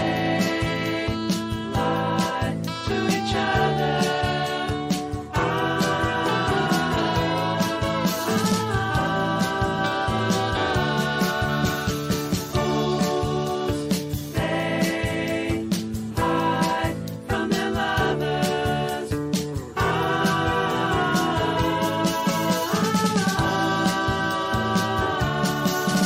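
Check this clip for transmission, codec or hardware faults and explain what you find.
One fault is present. At 0.76 s there is a bit error spike: a single corrupted sample where one bit flipped in storage or on a digital link, throwing the value by a power of two, peaking at about -24 dBFS, then returning. It sounds like one sharp, broadband tick unrelated to the surrounding sound.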